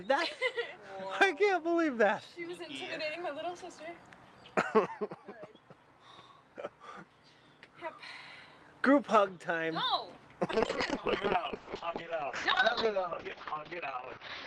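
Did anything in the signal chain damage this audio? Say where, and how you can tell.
Yes. The damage is a call bitrate drop at the codec stage, starting at 10.53 s and lasting to the end of the clip, about 3.9 s. The top end collapses from a full 20 kHz band to a 6 kHz cutoff, and the sound turns coarse and muffled. That fits the encoder falling from around 48 kbps to about 7 kbps after the call's bandwidth estimate dropped, forcing coarser coding and removal of high frequencies.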